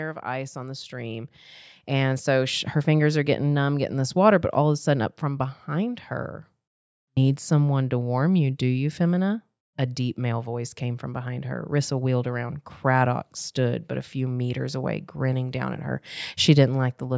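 From 0.23 to 2.72 s, automatic gain rising: the control judged the input too quiet and raised its gain by about 9 dB, so speech and background swell together.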